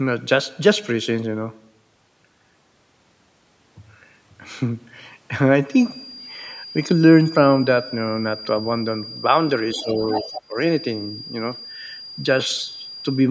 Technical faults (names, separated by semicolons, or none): feedback whistle; other side's voice leaking through; speech suppressed in double talk